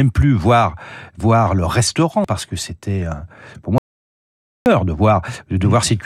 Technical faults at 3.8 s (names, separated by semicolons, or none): audio dropout to silence